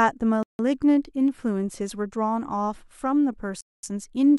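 At 0.43 s the speech cuts abruptly to silence for about 0.16 s, then resumes at 0.59 s; a longer gap of about 0.22 s follows from 3.61 to 3.83 s. Both dropouts sound like a Bluetooth stall, likely from interference holding up wireless packets so the headphones' buffer emptied and playback paused until the delayed data arrived. The sound simply stops and picks up again rather than fading.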